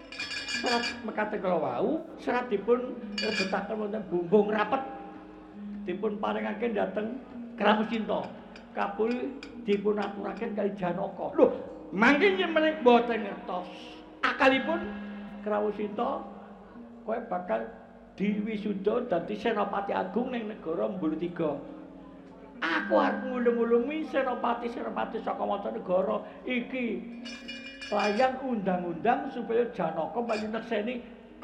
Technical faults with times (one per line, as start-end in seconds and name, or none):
1.98-2.09 corrupt frame concealed
15.28-15.32 corrupt frame concealed
27.36-27.48 corrupt frame concealed